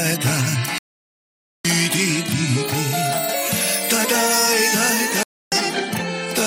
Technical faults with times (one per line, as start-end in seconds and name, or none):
0.78-1.65 digital broadcast dropout
5.23-5.52 digital broadcast dropout